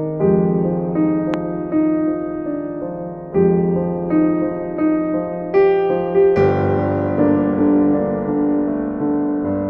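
A music clip with one loud pop at 1.34 to 1.36 s, a single sharp click standing roughly 15 dB above the music, which continues unbroken beneath it. The likely cause is a voltage spike from a plug, switch, static discharge or driver glitch, appearing as a tall narrow spike in the waveform and a thin full-height vertical line on a spectrogram.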